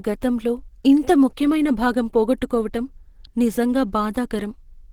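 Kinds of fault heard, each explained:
Opus compression: plainly audible grainy, hoarse roughness across the speech, likely from a low bitrate around 16 kbps, pushing the encoder into its hybrid speech mode.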